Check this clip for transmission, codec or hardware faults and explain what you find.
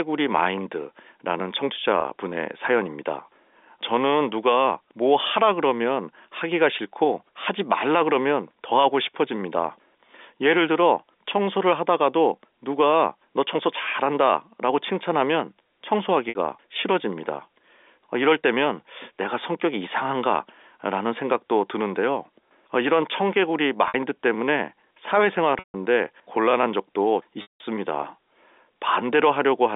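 Packet loss with pitch repetition hits at 2.01, 16.29, 23.88, 25.59 and 27.42 s, with gaps of 30, 60, 60, 150 and 180 ms. The receiver bridged each gap by repeating the last pitch period and fading it over about 50 ms, so the three shorter gaps sound like a briefly held, buzzy tone. The two longest fade to silence before the speech cross-fades back in. The G.711 telephone coding is heard as the band-limited phone sound of the line, and it is not a fault.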